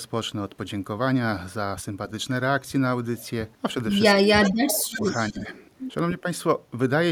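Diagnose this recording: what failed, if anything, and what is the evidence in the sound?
Speech suppressed in double talk, in call processing: the speech dips by up to about 25 dB from 4.23 to 5.05 s and again from 5.30 to 5.45 s, likely from an echo canceller ducking its own talker along with the loudspeaker echo.

Echo leak, also in call processing: a repeat about 10 to 30 dB below the speech trails about 320 ms behind at 4.67, 4.92 to 5.33 and 5.50 s, likely residual loudspeaker echo. The fixed delay distinguishes it from room reverberation.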